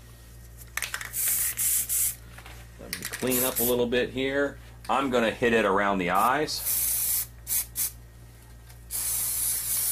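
No technical faults can be heard anywhere in this audio. There is nothing in the sound that needs a time or a value to describe it.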